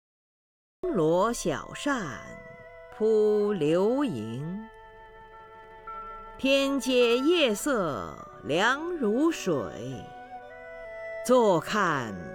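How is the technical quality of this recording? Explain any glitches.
The recording has one clear fault: a cut-off start. Capture began late, joining the signal partway through a sound rather than before it. The first 0.84 s are digital silence, and at 0.84 s the audio switches on abruptly in the middle of an ongoing sound, with no natural attack or fade-in leading up to it. Whatever came before that point is missing, so the opening sounds truncated, as if the listener arrived a moment too late.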